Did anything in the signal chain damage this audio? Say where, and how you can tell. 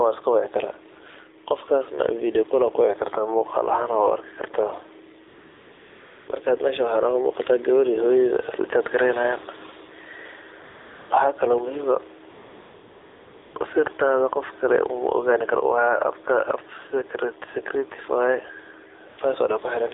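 Yes. At the call-processing stage, the level never sits still. The faint room noise, which is normal and well below the talker, sits under a gain that swings a few dB with each loud syllable. That pumping makes loud and soft parts sit closer together than they should. The likely cause is input gain set too hot, with a fast limiter or compressor clamping down on each peak and releasing in the pauses.

At the codec stage, the whole clip carries AMR narrowband mobile codec damage. Nothing comes through outside roughly 300 Hz to 3.7 kHz, so it has that boxy phone-line sound. On top of that, the voice is buzzy and plainly synthetic, with a swirly edge on the background. That's what you get from the vocal-tract model at a low bit rate, and it fits AMR-NB's 7.4 kbps mode.

Also from the codec side, there's AMR comfort noise at 5.28–6.28 s, 10.64–11.10 s, 12.30–13.56 s and briefly at 19.10–19.18 s. 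In each stretch the real background drops out and a smooth, steady hiss switches in, then switches off when the talker returns. The phone decided nobody was talking, stopped sending speech frames, and the receiver filled the hole with synthetic noise.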